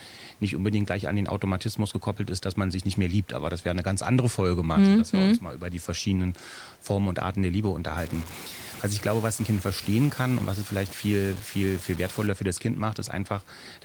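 From 7.98 to 12.27 s the speech turns grainy and harsh, with gritty distortion roughly 15 dB down that moves with the speech and quiet tails that sputter. The likely cause is low bit depth without dither: samples truncated to 5 bits, so the error follows the signal.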